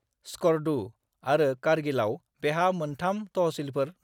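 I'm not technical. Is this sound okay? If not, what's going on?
Yes, the speech is fine, with nothing wrong to report.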